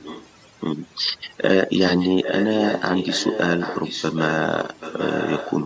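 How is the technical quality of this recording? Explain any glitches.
The technical quality is poor: two faults affect this speech recording.

Overdone noise removal affects the whole clip. A noise reduction stage was set too aggressively, cutting individual frequency bands deep whenever they sat close to its noise estimate, and the quieter parts of the voice were removed along with the noise. As a result, the background collapses into near silence dotted with twinkling specks. The content stops at around 8 kHz, which is the normal band limit of call microphone processing and not a separate fault.

An echo leak appears from 0.0 to 0.29 s, from 1.78 to 4.37 s, and from 4.62 to 5.57 s. The likely cause is a far end playing the call over a loudspeaker, with its echo canceller failing to remove everything its microphone picked up and sending the remainder back. What you hear is a copy of the voice trailing the original by 782 ms. 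It sits roughly 15 dB down in the first stretch and about 10 dB down in the later two, so it becomes more noticeable as the clip goes on.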